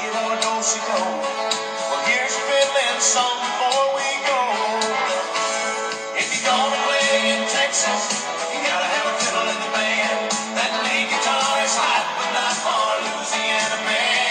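Nothing here jumps out as a technical fault; the audio just carries on as it should, with no glitches, gaps or odd artefacts anywhere along the way.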